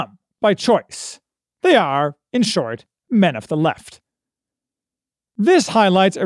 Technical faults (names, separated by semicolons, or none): none